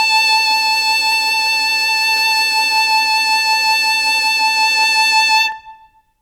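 Listening through the music, nothing stood out as a technical fault at any point.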